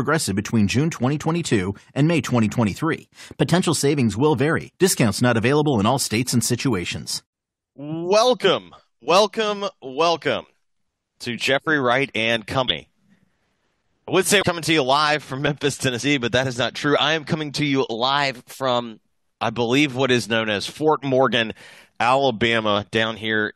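A drift correction step shifts the audio from 2.96 to 3.63 s and again from 17.93 to 19.04 s, when playback runs about 6.2% fast and rises roughly 104 cents, just over a semitone. From 22.01 to 22.76 s it does the reverse, slowing about 6.2% and dropping about 111 cents. Speed and pitch move together, which points likely to clock-matching software changing the playback rate in a single jump to refill or drain its buffer. Compressed frames are skipped at 12.67 to 12.72 s and at 14.41 s. Each time the audio leaps forward by about a tenth of a second, which fits whole frames being missing or rejected by the decoder as damaged.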